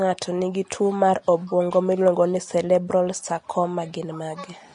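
From start to finish, the speech carries plainly audible codec damage, likely Vorbis compression at a low setting, which fits a bitrate of around 34 kbps. Nothing survives above 10.6 kHz, and the remaining treble is quantised so coarsely that fine detail turns into hiss-like noise, leaving sibilants grainy and consonant onsets blurred. A spectrogram would show a hard ceiling at 10.6 kHz, with speckled, noisy texture filling the upper bands beneath it.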